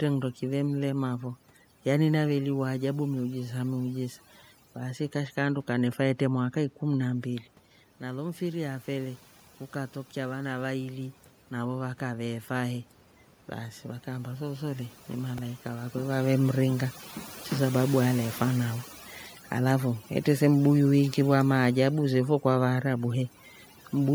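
Overdone noise removal runs through this whole speech recording. A noise reducer set far too strong has pulled individual frequency bands down wherever they sat near its noise estimate, taking quiet parts of the voice with them. The room noise has dropped and broken up into twinkling specks. A repeated buffer appears at 15.38 s, between "baasi vakaamba sooso le" and "vakwe vavemringa cho sababu". New audio arrived late, so a tiny slice was played again several more times with hard joins. It comes across as a click or brief buzz rather than a stutter, which fits a 64-sample buffer of about 1.3 ms, and it drops about 5 ms of audio. The level shifts near 7 s and 15.5 s come from the talker moving relative to the microphone.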